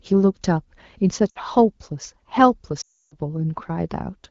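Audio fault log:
1.29–1.38 s and 2.81–3.14 s, lost AMR speech frames. Damaged frames were dropped and the AMR-WB decoder filled the gaps by repeating the last good settings at falling gain. The 60 ms gap, about three frames, dips to near silence. The 300 ms gap fades quickly to near silence, then returns rough.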